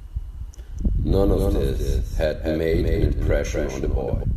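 From the first moment, the speech carries a doubled audio track: a second, full-band copy trails the original by roughly 300 ms at about 5 dB lower, with no decay or room colour. The likely cause is the same signal reaching the mix twice, once through a slower path.

At 0.79 s and again at 4.23 s, damaged data in a compressed stream produces a brief glitch. The decoder misreads corrupted frames, loses sync and jumps to the next valid frame header.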